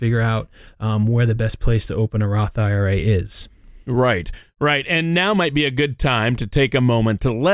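Nothing in the speech recording stood out as a technical problem on listening.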